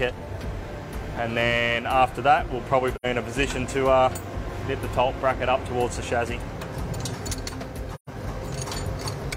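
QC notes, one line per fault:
2.95–3.06 s and 7.95–8.09 s: AAC frame loss with muting. There are two soft-edged dropouts, about 0.11 s and 0.15 s long, which fit two and three lost frames. The decoder zeroed their spectrum, and the overlapping windows fade the sound out and back in.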